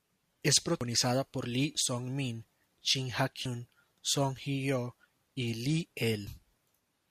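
Speech with compressed frames skipped at 0.81 s, 3.46 s and 6.27 s. The audio jumps ahead by roughly two, one and two frames of 85.3 ms, about 150 ms, 100 ms and 150 ms.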